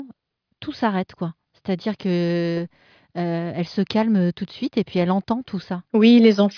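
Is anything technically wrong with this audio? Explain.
No, nothing technically wrong can be heard here.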